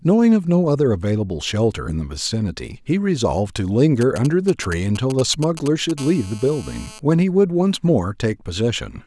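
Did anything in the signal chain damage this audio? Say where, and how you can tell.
Yes. GSM signalling bursts get into the analogue wiring from 4.01 to 5.91 s. A nearby 2G phone was exchanging short signalling transmissions, and an audio input or cable rectified the radio pulses. The result is a galloping dit-dit-dit of short buzzes at a 217 Hz burst rate, roughly 15 dB below the speech. Its irregular, grouped rhythm sets it apart from a steady electrical fault, and the 217 Hz pitch sets it apart from 50 or 60 Hz mains hum.

The same analogue-wiring path carries GSM phone buzz from 5.98 to 6.99 s, when the phone moves into a call and transmits continuously at 217 bursts per second. The rectified pulses become a hard, raspy buzz at 217 Hz with a dense stack of harmonics, about 21 dB below the speech. It doesn't follow the speech at all. Unlike the preceding bursts it holds steady instead of galloping, and its harsh, buzzy tone rules out smooth mains hum.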